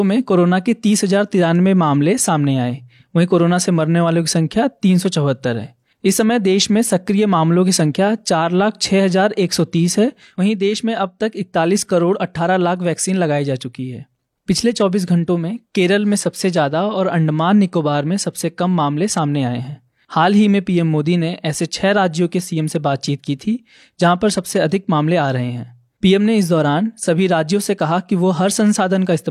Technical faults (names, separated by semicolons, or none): none